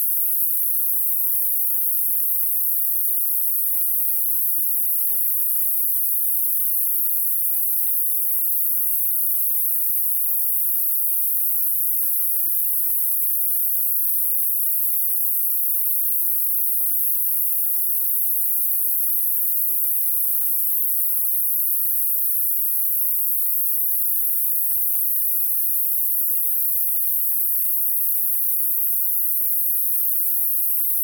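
No dropouts, distortion, level jumps or timing errors turn up anywhere across the clip.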